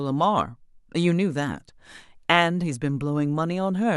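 Nothing here jumps out as a technical problem; it's a short bit of speech with no faults to point to anywhere in it.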